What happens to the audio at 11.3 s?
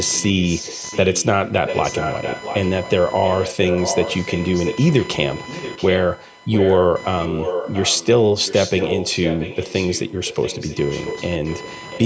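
At 11.3 s a delayed copy of the speech follows about 0.68 s behind, roughly 10 dB quieter. This echo leak runs from 8.4 s to the end, likely caused by a loudspeaker echo the far end's canceller missed.

Computer activity noise also runs throughout. Processor or mouse load shakes the shared ground, adding buzzing pulses near 1 kHz, about 20 dB below the speech.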